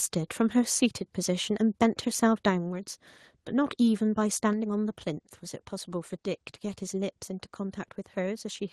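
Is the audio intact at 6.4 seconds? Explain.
Yes, the speech at 6.4 seconds comes through intact, with no dropout, glitch or distortion at that moment.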